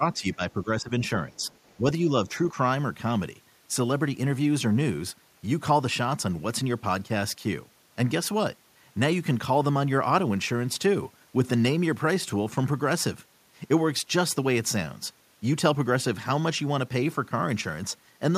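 From 0.00 to 0.93 s, with both ends apparently talking at once, the echo canceller likely could not tell the local talker apart from loudspeaker echo and pulled the whole signal down. That is speech suppressed in double talk: the speech sinks by about 10 dB at its deepest, dipping in patches that add up to roughly half a second. Shallower dips of about 5 dB follow from 1.30 to 1.52 s.

Between 1.35 and 1.75 s, the canceller likely left some of the far end's loudspeaker sound in the microphone signal, so the other side's voice leaks through. It sits about 40 dB below the speech, a faint second voice under the talker rather than a distinct echo.

Double-talk suppression returns from 1.77 to 2.09 s, again around 5 dB deep, and then as two brief dips of about 40 ms each at 2.26 and 2.53 s.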